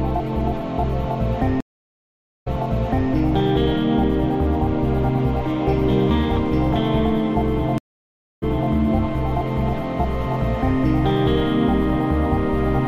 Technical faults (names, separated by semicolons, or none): stream reconnect